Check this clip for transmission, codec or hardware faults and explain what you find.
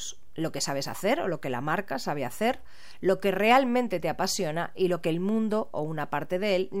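One fault is present: a DC offset running through the entire recording, from start to finish. The speech waveform sits on a constant shift away from zero, at about -37 dBFS. A DC offset has no frequency of its own, so it cannot be heard as a tone. It shows up as steady energy at 0 Hz, the very bottom of the spectrum, and it uses up a small slice of headroom, because peaks on one side reach full scale sooner.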